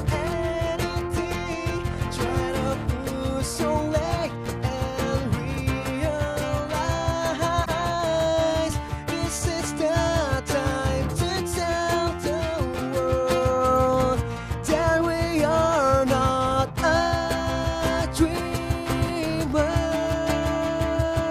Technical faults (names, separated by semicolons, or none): broken MP3 bit reservoir